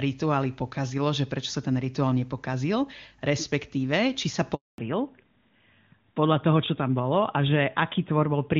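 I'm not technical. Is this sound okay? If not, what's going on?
No. There is a handover gap at 4.54 s, right after "či sa": the phone switched the call from one network to another, and for about a quarter of a second (240 ms) no sound got through. The voice cuts off quickly and there is silence until the new connection starts carrying audio again at 4.78 s. Anything said in that moment is simply missing.

Straight after that, from 4.78 s to the end, comes a fallback to narrowband. Until then the call used the clearer HD Voice system, but after the switch it drops to an older, lower-quality phone codec that can't carry anything above 4 kHz. The crisp upper part of the sound disappears, so the speech turns duller, more muffled and rougher, like an old landline call.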